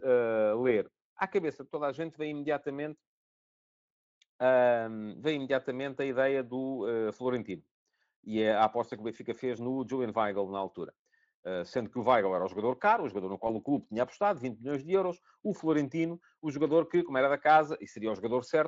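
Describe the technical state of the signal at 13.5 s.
VoIP packet loss concealed by the speech codec occurs from 13.47 to 13.54 s, right after "caro o jogador no" and before "o clube tinha apostado". One 20 ms frame went missing, and the decoder filled the gap by extending its last pitch and spectral envelope at falling gain. The result is a brief smeared stretch that fades. Because each frame depends on the previous one, the speech stays weakened for several tens of milliseconds after packets resume, against the light Speex coding around it.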